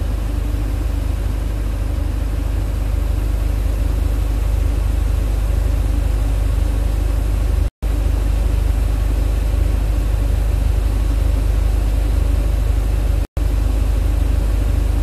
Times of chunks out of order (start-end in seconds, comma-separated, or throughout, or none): none